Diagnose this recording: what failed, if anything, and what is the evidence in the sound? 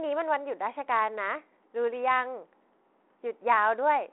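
Nothing failed: the speech sits in a telephone band of roughly 300 Hz to 3.5 kHz with nothing above 3.9 kHz and only the light texture expected of G.726 ADPCM at 32 kbit/s, as on a DECT cordless line.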